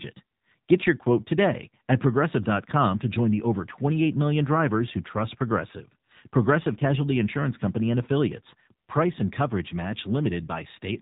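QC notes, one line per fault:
Throughout, AMR narrowband mobile codec: nothing passes above about 3.8 kHz, and the speech has a plainly buzzy, synthetic edge from pulse-driven vocal-tract modelling, which fits a low mode near 7.4 kbps. This sets it apart from a simple low-pass, which only dulls.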